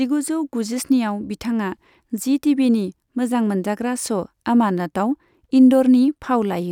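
Speech recording, no technical faults detected anywhere in the clip.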